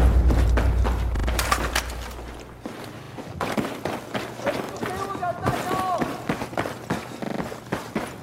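The audio stutters four times, each a repeated buffer. At 1.16 s a short slice plays three extra times, lasting to 1.28 s. At 3.04 s it repeats twice, at 4.64 s once, and at 7.24 s four times, to 7.4 s. Each repeat meets the next with a hard join, heard as a brief stutter. New audio arrived late, so the device replayed its last block. The repeat length fits a 40 ms buffer. Essentially no audio is lost.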